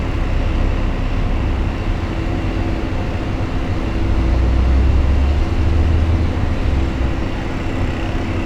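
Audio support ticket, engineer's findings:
Signal path intact, with level, timing and channel content holding steady throughout the audio and no audible defect found on listening.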